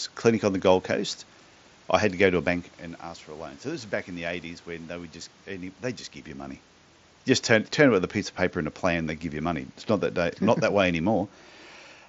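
This speech clip has no technical fault. Room noise sits behind the talker, whose level shifts as they move around 2.5 s and again near 6 s, and the audio carries the wideband band limit of a Bluetooth mSBC headset link, with speech reaching up to 8 kHz and a light grain on louder sounds.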